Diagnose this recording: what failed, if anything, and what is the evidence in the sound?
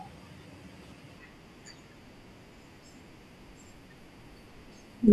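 Nothing in this speech recording points to a failure at any stage of the chain. Listening through gives no evidence that any part of capture, processing, transmission or playback went wrong.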